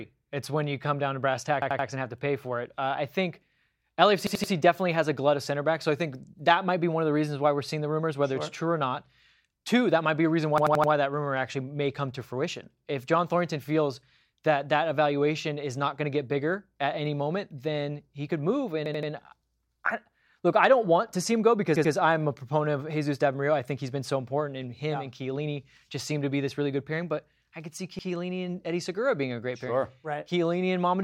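Repeated buffer stutters interrupt this speech clip at 1.62–1.88 s, 4.27–4.52 s, 10.58–10.92 s, 18.86–19.12 s, 21.76–21.93 s and 27.99–28.08 s. At each point, a chunk of about 85 ms, which fits a 4096-sample buffer, plays again one to four extra times with a hard join, because new audio failed to reach the device in time. The repeats delay the speech rather than dropping any.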